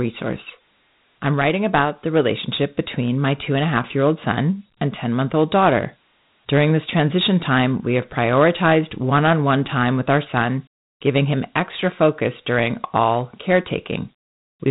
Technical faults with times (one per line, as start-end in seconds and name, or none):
0.00-14.70 Dialogic VOX ADPCM